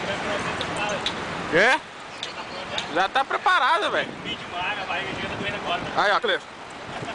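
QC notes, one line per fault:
5.17–7.14 s, time-stretched section: from 5.17 s to the end, the pace jumps to 1.51 times faster with no rise in pitch, so the sound turns rushed. The likely cause is software compressing this passage by cutting out short slices to preserve pitch.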